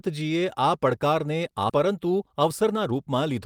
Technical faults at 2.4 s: jitter buffer speed-up

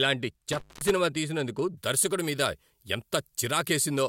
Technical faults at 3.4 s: pre-emphasis left on

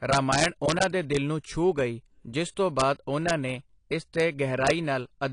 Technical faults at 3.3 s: AAC compression; integer overflow

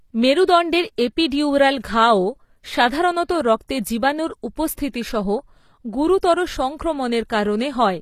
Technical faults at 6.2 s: HE-AAC compression; pre-echo

